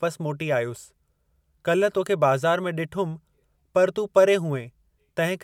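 No technical faults can be heard anywhere in this recording. The speech runs without any break, dropout or distortion arising in the capture or playback chain.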